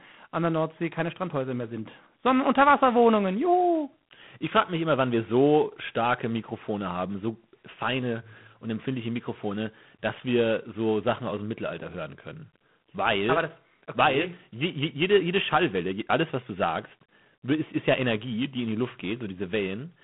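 It's a speech clip with G.726 ADPCM damage the whole way through: a harsh, rasping hiss that rises and falls with the talker's level, which fits 24 kbit/s coding. The band runs roughly 150 Hz to 3.4 kHz, with nothing above 3.8 kHz.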